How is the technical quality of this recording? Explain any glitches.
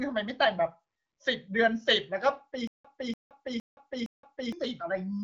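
The recording has one clear glitch, a stutter with silent gaps, heard against the band-limited HD Voice character of AMR wideband coding, with nothing above about 7.7 kHz.

From 2.67 to 4.52 s, a 0.29 s burst of speech repeats four times, each followed by about 0.17 s of dead digital silence, recurring every 0.46 s. The likely cause is a stalled stream replaying its last fragment at each retry and then running empty. Unlike a simple dropout, the same burst returns at a steady pace, and the speech that should have filled that span is missing.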